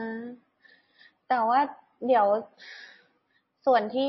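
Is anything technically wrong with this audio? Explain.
Yes. Throughout, the speech sounds watery and swirly with nothing above 5.8 kHz, likely from heavy MP3 compression near 25 kbps, where weak frequency lines switch on and off between frames, unlike a plain low-pass filter.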